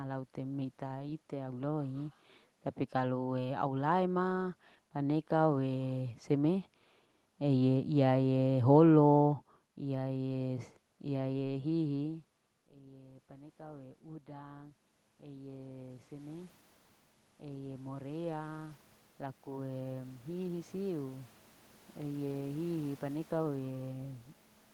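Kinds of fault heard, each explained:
Automatic gain rising: Around 12 s the input falls by about 22 dB as the talker shifts away, and from 12.04 s the gain control gradually winds itself up, so voice and room noise swell together right through to the end.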